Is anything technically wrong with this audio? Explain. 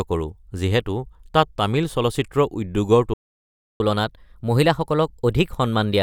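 Yes, there are two faults. A playback stall at 3.14 s was likely caused by the player running out of buffered data or its thread being blocked, so output stopped until it recovered. The speech cuts off mid-flow into silence lasting about 0.66 s, until 3.8 s.

A catch-up at higher speed follows from 3.8 s to the end. The player resamples its backlog to regain the lost time, running at 1.1 times normal speed. The speech sounds hurried and raised in pitch by roughly a semitone and a half.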